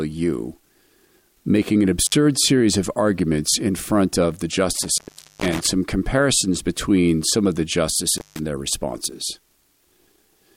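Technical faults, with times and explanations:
2.05–2.14 s, 4.73–5.68 s and 8.18–8.39 s, intermittent contact: a loose cable or plug briefly breaks the connection, so the sound drops out for about 51 ms, 447 ms and 148 ms, with crackle as contact scrapes open and shut and faint hiss in the gaps.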